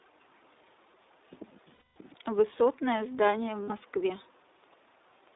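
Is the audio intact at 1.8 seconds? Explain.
No. Lost iLBC frames cover 1.74 to 1.96 s, a gap of 220 ms, which matches eleven consecutive 20 ms frames going missing. With no data for that stretch, the decoder fills it by repeating the last pitch period it received, blended with noise and fading as the loss continues. The result is a held, slightly buzzy, breathy vowel-like sound in place of the real speech. Because each iLBC frame decodes on its own, the voice returns almost immediately at 1.96 s.

Around that moment, the iLBC codec's coding damage is also plainly audible. The band runs only from 300 Hz to 3.7 kHz, and the excitation is rebuilt frame by frame in 20 ms blocks, which fits the 15.2 kbps mode. This gives the speech a rough, somewhat synthetic edge and removes all content above about 3.7 kHz.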